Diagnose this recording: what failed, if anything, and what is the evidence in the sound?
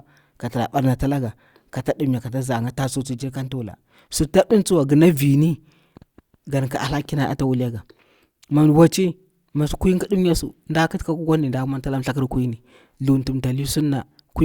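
Nothing in this speech recording points to a failure at any stage of the chain. There is no audible event or artefact to cite as evidence, so no diagnosis is needed.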